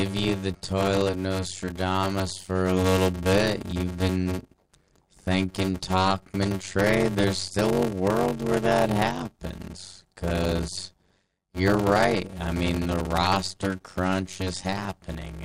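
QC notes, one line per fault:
Throughout: block size mismatch (padded). The speech carries a steady buzz at 93.8 Hz and runs slow, at 0.625 times normal speed, yet keeps its timbre. One stage hands over blocks shorter than the next stage reads, and the shortfall in each block is filled with silence. That repeated gap produces the buzz at the block rate and stretches the timing. The ratio fits 320-sample blocks being read as 512-sample ones.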